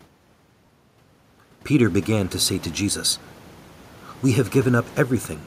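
Lost LE Audio frames occur at 0.66 to 0.69 s and again at 3.08 to 3.11 s, just after "began to say to." Each gap lasts 30 ms, which fits three lost 10 ms LC3 frames. During each gap, the decoder fills in by repeating the last good spectrum with randomised signs, so the speech briefly blurs into a short, noisy smear instead of a clean dropout. The gaps are too short for the concealment to fade noticeably toward silence. Room noise in the background rises by about 13 dB around 2 s.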